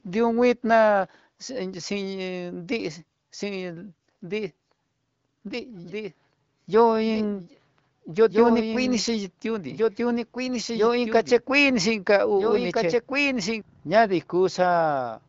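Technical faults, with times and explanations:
5.47 to 13.61 s, doubled audio track: a second, full-band copy of the speech runs about one and a half seconds behind the original, roughly 5 dB quieter. It carries no reverberant tail or room colouring, so it sounds like a clean overlapping repeat rather than an echo, and it cuts in and out abruptly at both ends. This likely comes from the same signal being captured again through a slower path, or an edit leaving two offset copies mixed together.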